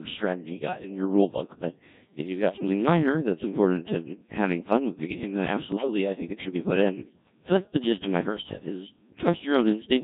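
The whole clip has passed through the Codec 2 vocoder, and its sound fits a mode around 1.3 kbit/s. Only pitch, voicing, energy and a coarse spectral envelope survive the channel, and the decoder rebuilds the speech from sine waves instead of the original waveform. The damage is heavy throughout: the speech comes out robotic and buzzy.

At 2.54 to 2.67 s and again at 5.72 to 5.87 s, bit errors on digital voice radio corrupt the stream at roughly one bit in twenty. The disturbance fits about three frames being hit each time. Each corrupted bit sets the pitch, level, voicing or spectrum for an entire frame, so the synthetic speech lurches in pitch and loudness and shifts in tone colour. It briefly breaks into warbling, bleepy gibberish.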